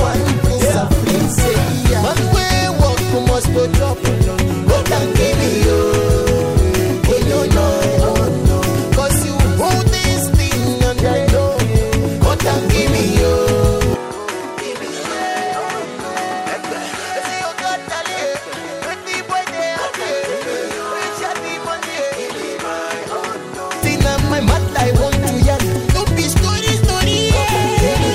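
At 13.94 s the sound abruptly turns duller and quieter, roughly 10 dB down, with a new noise floor sitting around 30 dB beneath the signal, and there is no gap at the change. Likely cause: the input switched to a poorer device. A spectrogram shows everything above 11.9 kHz vanishing at that moment, and the waveform shrinks in height. Both recover at 23.83 s when the original input returns.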